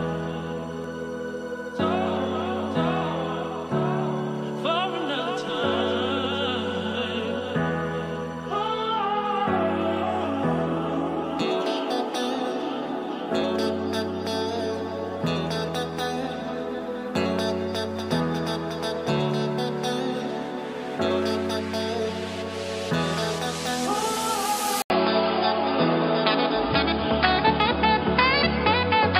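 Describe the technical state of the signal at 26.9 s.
At 26.9 s the sound is dull and capped at 5 kHz, with a faint new noise well below it, after an 80 ms gap at 24.82 s; likely the input switched to a poorer device.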